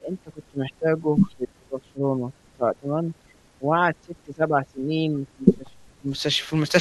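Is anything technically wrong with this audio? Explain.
Yes. The speech is repeatedly suppressed in double talk, from 0.0 to 2.34 s, 2.53 to 3.36 s, and 3.58 to 6.09 s. The level dips hard, by roughly 30 dB at its deepest. This likely comes from an echo canceller that mistook the talker for loudspeaker echo and attenuated both.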